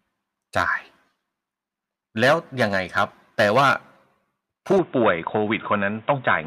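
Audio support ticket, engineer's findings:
Speech turns dull and boxy at 4.78 s and stays that way to the end. Nothing above 3.8 kHz after that point. No gap at the change. Loudness holds steady. A new, faint background noise floor sits well below the speech. Likely cause: input switched to a poorer device, such as a second microphone or a headset call profile. Its narrower band and its own noise take over mid-recording.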